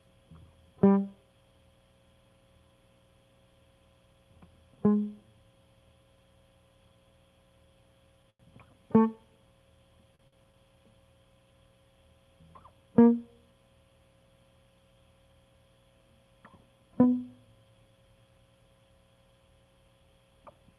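Short stalls from a late packet hit the music at 8.30 to 8.41 s, then twice in quick succession at 10.15 to 10.21 s and 10.27 to 10.34 s. Each time a packet arrived late and the jitter buffer ran dry, so the receiver held the last sound for 93, 38 and 52 ms before resuming where it left off. Nothing is lost, but the music briefly freezes on a stretched tone with a slight buzz or dip, heard through a call codec whose top end stops near 12 kHz.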